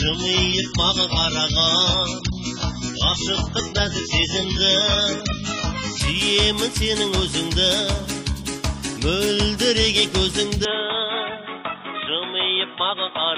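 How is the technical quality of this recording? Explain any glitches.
The recording has two audible faults: a muffled, artefact-heavy opening that suddenly clears, and a drop in brightness and level near the end.

Adaptive stream starting at a low bitrate, 0 to 6.0 s: the player began on a lean version of the stream and stepped up once the connection was measured. Nothing reaches above 7.6 kHz, and codec artefacts are stronger, which fits a start near 12 kbit/s. Quality then jumps abruptly, with no gap.

From 10.65 s to the end, the band narrows so that nothing sounds above 3.8 kHz, the tone turns dull and boxy, the level falls by a few decibels, and a faint new noise floor appears. There is no silence at the change. The likely cause is an input switched to a poorer device, such as another microphone or a headset's call profile.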